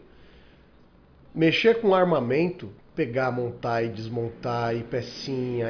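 No technical faults can be heard anywhere in this speech recording. Nothing in the audio needs to be marked or described as a fault.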